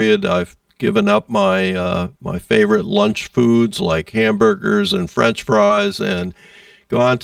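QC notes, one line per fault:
Throughout: channel delay (comb filtering). One channel arrives around 5 ms behind the other, and the pair is summed to mono. Content common to both cancels wherever the delay equals an odd half-period, so fixed notches sit at about 100 Hz and then at evenly spaced steps of about 200 Hz above it. The sound is hollow and phasey throughout, with a thinned low end and a stationary filtered colouring that does not follow the material.
5.65–5.71 s: short concealed packet loss. About 40 ms of audio failed to reach the decoder in time, and roughly 39 ms of that was filled by extrapolating the preceding sound. Voiced portions are continued from their last pitch and unvoiced portions as shaped noise before blending back into the real signal. The result is a brief smeared, wobbly patch where the fine detail of the original is replaced by a prolonged version of what came just before.
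5.69–5.71 s: lost packet rebuilt from error correction. The last 20 ms of that loss, one packet, was recovered from a low-bitrate copy carried in the following packet, as Opus in-band forward error correction does. There is no gap at this point, but the rebuilt frame is coarser and noisier than the surrounding audio. This rougher stretch leads straight into the restored full-quality signal.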